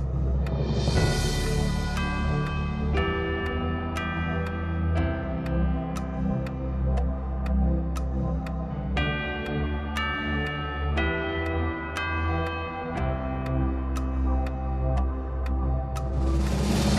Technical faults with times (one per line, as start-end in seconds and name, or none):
none